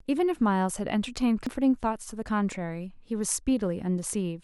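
At 1.47 s the speech jumps forward abruptly, losing roughly a tenth of a second. This is compressed frames skipped: whole encoded frames never reached playback, so the audio jumped ahead by the length of the missing frames.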